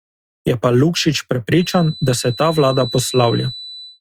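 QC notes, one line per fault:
1.51 to 4.01 s, feedback whistle: a thin, steady whistle at 4 kHz sits roughly 15 dB under the speech, swelling and fading slowly in level until the clip ends. The likely cause is a loudspeaker-to-microphone loop poised at the feedback threshold, sustaining one tone without running away.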